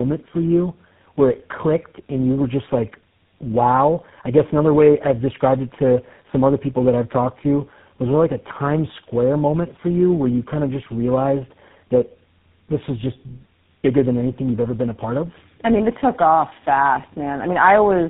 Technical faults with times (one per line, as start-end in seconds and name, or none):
0.00-18.10 tandem speech coding